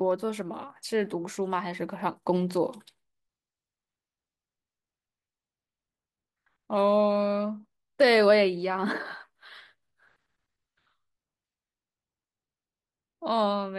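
At 1.33 to 1.35 s the audio has chunks out of order. One 10 ms chunk was delivered or written one chunk late, so it plays after the chunk that should have followed it. No audio is missing, but the two pieces are swapped, leaving three abrupt seams where the waveform no longer lines up. In the speech this comes across as a tiny jumbled blip.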